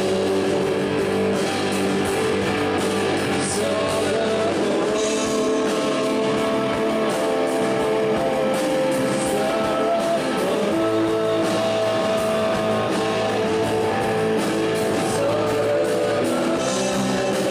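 Timecode bleed runs from 6.42 to 14.42 s, an 8-second stretch of linear timecode leaking in from a neighbouring track or cable. The code is a square wave that flips between tones around 1 kHz and 2 kHz, sitting roughly 20 dB below the wanted sound. It produces a steady chirping warble behind the audio, and its repeating pattern fits 23.976 frames-per-second code.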